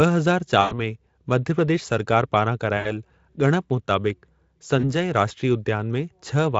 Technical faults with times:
0.61-0.79 VoIP packet loss concealed by the speech codec
2.77-2.93 VoIP packet loss concealed by the speech codec
4.79-4.93 VoIP packet loss concealed by the speech codec

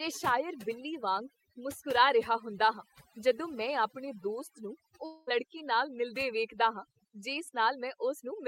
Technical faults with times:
0.00-8.47 overdone noise removal
5.05-5.29 long network dropout

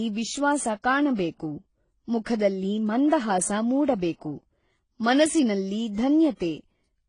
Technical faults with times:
0.00-7.08 transcoding between lossy codecs

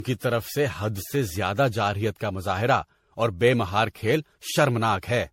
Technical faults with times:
0.00-5.33 generation loss

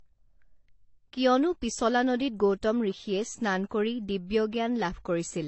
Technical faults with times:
0.00-5.48 transcoding between lossy codecs

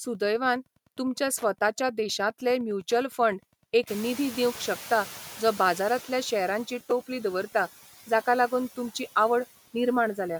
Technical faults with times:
0.00-10.39 Wi-Fi interference
3.87-6.64 noise suppressor catching up
6.91 repeated buffer

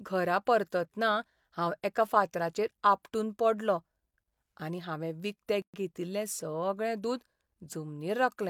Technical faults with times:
5.62-5.74 gap at a join of encoded pieces

